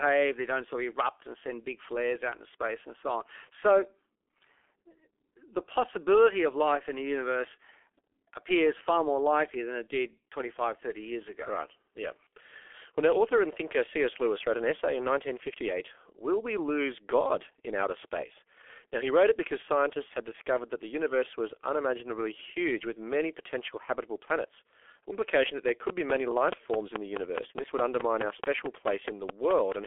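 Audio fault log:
Throughout: G.723.1 codec, heavily squeezed to about 6.3 kbit/s over a 300–3400 Hz line. Nothing above 3.6 kHz, so the speech sounds muffled and hoarse with smeared consonants.
25.47–29.73 s: train of clicks, about twenty evenly spaced pops at 4.7 per second, peaking roughly 20 dB over the speech. Likely nearby equipment interference or a faulty connection.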